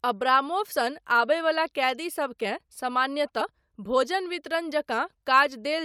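Speech with damaged data in a compressed stream at 0.71 to 0.73 s and 3.40 to 3.42 s: corrupted frames make the decoder lose sync.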